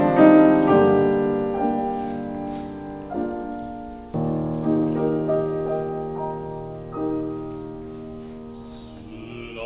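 A skip ahead occurs at 4.14 to 4.16 s. Playback leaps forward, losing roughly 0.4 s of audio, and the two sides are butted together with no silence or fill. Unlike a dropout, which leaves an audible gap, or concealment, which smears or repeats sound, this just cuts material out. A stretch of audio was dropped while later audio was already queued, either on the way or by the jitter buffer when it overflowed. The audio throughout is band-limited with nothing above 4 kHz, which fits a G.711 mu-law call codec.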